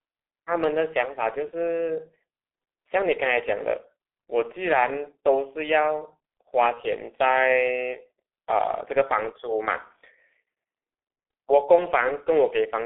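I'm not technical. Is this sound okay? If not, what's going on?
No. G.723.1 codec damage runs through the whole recording. This old internet-phone system keeps only sound between about 300 Hz and 3.5 kHz and rebuilds the speech from a coarse model in short chunks, so it sounds muffled and hoarse, with smeared consonants.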